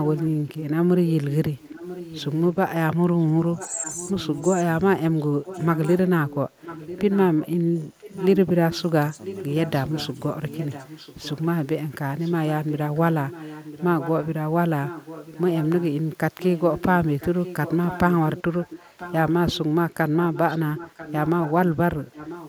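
A faint repeat of the speech, trailing it by about 0.99 s and sitting roughly 15 dB below it, appears from 0.03 to 0.3 s and again from 1.58 s to the end. This is an echo leak, likely from a far-end loudspeaker whose echo canceller let part of the returning sound through.

Between 3.67 and 5.49 s the speech dips in short pieces, around 0.4 s in all, by roughly 10 dB at worst. From 7.88 to 8.11 s it drops again, roughly 15 dB, for about 0.2 s. This is speech suppressed in double talk, likely the canceller turning the talker down along with the echo while both sides overlapped.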